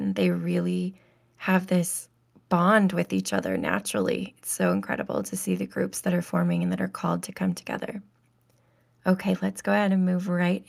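Nothing in this speech recording stands out as a technical fault at any point, so there's nothing to flag here.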